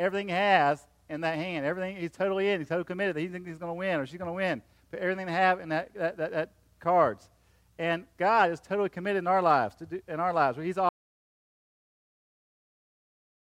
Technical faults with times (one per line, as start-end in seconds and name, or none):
10.89-13.45 audio dropout to silence